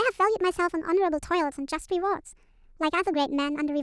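From start to finish the speech runs at the wrong sample rate: everything's one and a half times too fast and about seven semitones too high, which fits 16 kHz material played back at 24 kHz with no conversion, so voices come out chipmunky and rushed.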